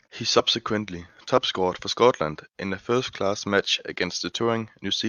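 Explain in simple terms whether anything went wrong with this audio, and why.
The decoder skipped compressed frames at 0.38 s and 1.36 s, so the speech jumps ahead by roughly 20 ms each time.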